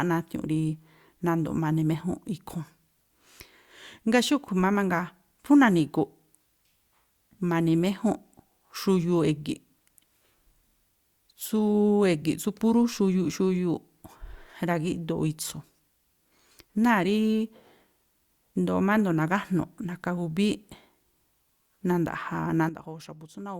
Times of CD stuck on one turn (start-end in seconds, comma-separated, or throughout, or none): none